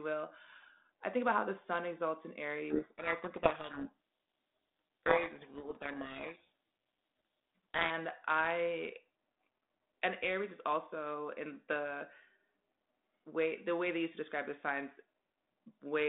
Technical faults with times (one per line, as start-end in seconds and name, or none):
2.70-7.91 codec payload misread